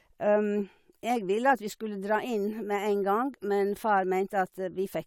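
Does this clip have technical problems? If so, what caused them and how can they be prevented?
No, the signal shows no technical problems, so there is nothing here to trace back to a cause or guard against.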